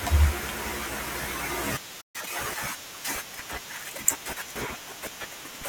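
At 2.01 s the speech just cuts out and stays silent until about 2.16 s, a playback stall of roughly 130 ms before it picks back up. Most likely the player ran dry of data or its thread got held up, so nothing reached the output.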